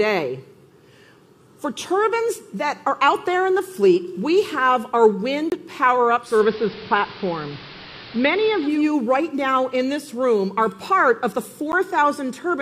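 At 5.50 to 5.52 s a block of digital silence cuts the sound out for 20 ms and brings it back with no fade. That is just long enough to be heard as a brief hole rather than a tick. The output buffer was either not filled in time or filled with invalid values and zeroed. What sets it apart from a fade or a level dip is the abrupt, hard-edged gap.

From 6.20 to 8.87 s the audio is a digital radio blending to analogue. The receiver loses the digital stream and cross-fades over 289 ms to the station's AM broadcast, then later blends back. During that stretch a hiss sits around 20 dB below the signal and the level shifts by about 3 dB. This changes the whole sound for seconds, unlike a momentary dropout.

At 11.72 s a second block of digital silence lasts only 10 ms. It is too short to register as silence and comes across as a tick or dip.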